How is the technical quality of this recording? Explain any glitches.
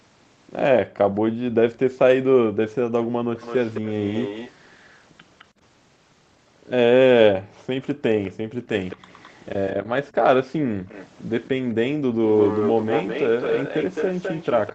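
The recording has two recurring call-path faults: the room background being gated by the echo canceller, and an echo leak that grows stronger toward the end. The audio also has nothing above 8 kHz, which fits a wideband call codec such as Opus.

Background gated by the echo canceller, 0.84 to 1.89 s, 2.84 to 3.31 s and 7.39 to 10.68 s: while far-end audio was playing, the canceller clamped the microphone down hard to suppress it. The room tone dips in short bursts, by about 40 dB in the first stretch and about 20 dB in the later two, then springs back once the canceller releases.

Echo leak, 1.15 to 1.78 s, 3.37 to 5.45 s, 8.23 to 9.44 s and 10.89 to 14.74 s: a delayed copy of the audio trails the original by 212 ms. It is faint at first, about 35 dB down, rises to about 15 to 20 dB down in the middle, and reaches only about 5 dB below the main signal from 10.89 s to the end. This is likely a loudspeaker-side canceller that failed to subtract what its microphone picked up and sent the residue back.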